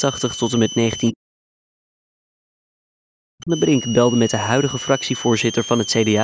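A switching supply whistle runs through the whole speech clip: a thin, high tone wandering between about 2.86 and 3.23 kHz and sitting roughly 15 dB below the speech. A switching power supply is running in an audible burst mode or beating with another one, and its pitch shifts as the load changes. On a spectrogram it shows as a bright, slightly wavering horizontal line near 3 kHz, well inside the band that stops at 8 kHz.

From 1.11 to 3.51 s the speech is turned down, which is most likely speech suppressed in double talk. With both ends talking at once, the echo canceller could not tell the near talker from loudspeaker echo and turned everything down, with the deepest cuts around 40 dB and roughly two seconds of that stretch affected. The waveform shows the envelope sinking, and the spectrogram shows the speech dimmed while the whistle line carries on.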